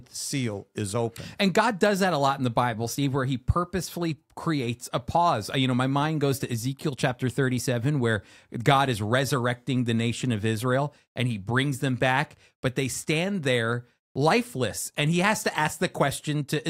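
Nothing in the recording stands out as a technical fault, so there's no problem here to point to at any moment.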